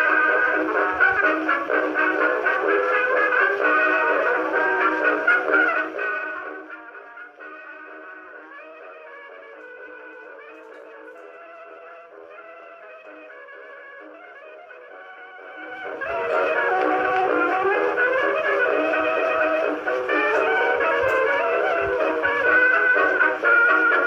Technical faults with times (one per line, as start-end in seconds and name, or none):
5.59-6.90 zipper noise
15.37-16.36 zipper noise